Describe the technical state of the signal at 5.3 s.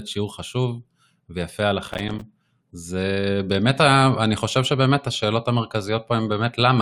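At 5.3 s the speech signal is intact, with no dropout, distortion, glitch or other fault audible at that point.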